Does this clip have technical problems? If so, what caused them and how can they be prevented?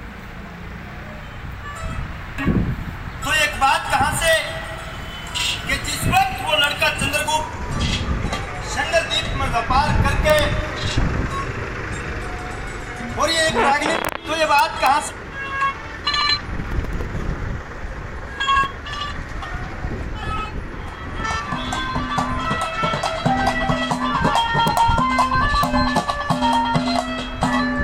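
Yes. Integer overflow causes harsh cracks at 4.28–4.33, 6.17, 6.64, 10.30–10.39, 14.05–14.09, 14.59–14.87, 24.68–24.77 and 25.64 s. Loud peaks passed the largest integer value. Instead of being limited, they wrapped to the opposite sign. Using saturating arithmetic, or leaving headroom before integer conversion, prevents this.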